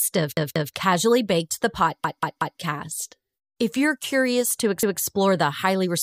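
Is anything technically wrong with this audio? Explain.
Yes. Speech stutters, one piece of about 186 ms looping with hard joins, at 0.37 to 0.74 s (two extra plays), 2.04 to 2.60 s (three extra plays), and 4.83 to 5.02 s (one extra play), between "you're curious to" and "the highly". This is a repeated buffer: when fresh audio arrived late, the device replayed its last buffer, a length that fits an 8192-sample buffer. Essentially nothing is lost; the sound is only delayed.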